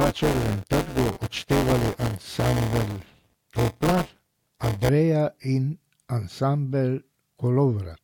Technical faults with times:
0.00-4.89 buffer tearing

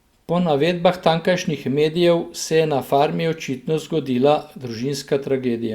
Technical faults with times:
none

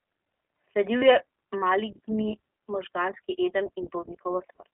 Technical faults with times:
0.00-4.74 iLBC codec
0.98-1.04 lost iLBC frames

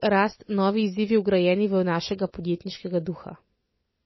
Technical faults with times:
0.00-4.05 MP3 compression

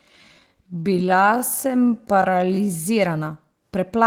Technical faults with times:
0.00-2.84 time-stretched section

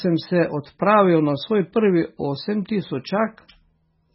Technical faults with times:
0.00-4.15 MP3 compression

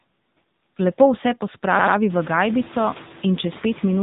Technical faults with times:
0.00-4.03 noise suppressor artifacts
0.00-4.03 AMR narrowband mobile codec

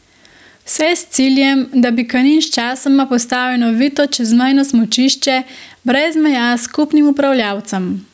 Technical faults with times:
0.00-8.13 gain pumping

